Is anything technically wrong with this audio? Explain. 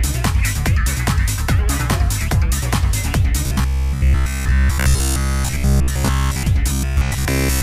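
Yes. From 3.46 to 6.48 s, and again from 6.73 s to 7.63 s, the sound turns into a rigid, metallic buzz: robotic sound from repeated short buffers. Audio is likely arriving too seldom, so playback loops the last short block, about 15 ms long, imposing a fixed 66.7 Hz buzz while most of the real audio is skipped. Unlike steady hum, the buzz still roughly tracks the underlying sound, and unlike dropouts, there are no silent gaps.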